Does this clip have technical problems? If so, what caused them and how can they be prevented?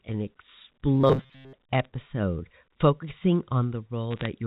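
Yes. From 0.95 to 1.54 s the sound turns into a rigid, metallic buzz fixed at 133 Hz that only loosely tracks the speech. This is robotic sound from repeated short buffers, and the likely cause is audio arriving too slowly, so the playback side loops a roughly 7.5 ms fragment, one period of the 133 Hz buzz, while real audio is skipped for most of that span. Prevent it by sizing the jitter buffer and scheduling so the playback buffer never runs dry.

Two bursts of sharp ticks and crackle appear over otherwise intact speech, from 1.73 to 1.85 s and from 4.11 to 4.26 s. These are bit errors on a digital phone line. On the G.711 A-law path, which passes nothing above 4 kHz, each flipped bit alters one sample. When a sign or high-order bit is hit, that sample jumps and produces a click. The error rate here is a few bits per thousand. Prevent it with a cleaner line, or with error detection and concealment on the link.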